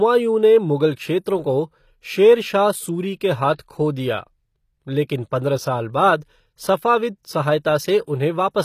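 Speech, and the whole clip has the gritty, metallic top end of what is likely HE-AAC compression: the treble is rebuilt from copied lower bands, so s sounds turn lispy, damage fits a low rate around 24 kbps, and nothing exists above 14.9 kHz.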